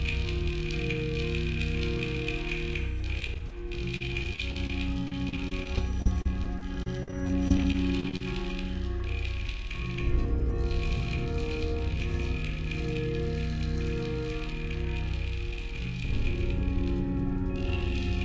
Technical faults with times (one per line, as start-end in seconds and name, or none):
3.20-3.52 repeated packet loss (robotic sound)
3.97-4.70 repeated packet loss (robotic sound)
5.08-8.21 repeated packet loss (robotic sound)